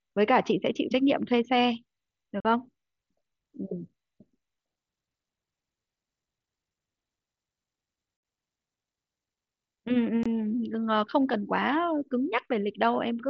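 Unconcealed Bluetooth headset packet loss at 2.40 s, 8.17 s and 10.23 s: voice packets between headset and phone were dropped and replaced with silence or an idle pattern, leaving abrupt gaps of about 45, 68 and 23 ms, the middle one a broken 75 ms stretch with a 60 ms hole.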